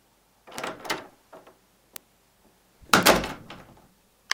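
A short recording of sounds carries three bit error spikes, isolated ticks at 0.58 s, 1.96 s and 3.03 s, where a flipped bit briefly made sample values jump by a power of two. The first spans three samples and the last two are single samples, peaking at about -10, -4 and -10 dBFS. On the waveform each is a lone needle; on a spectrogram, a thin full-band vertical line unrelated to the surrounding sound.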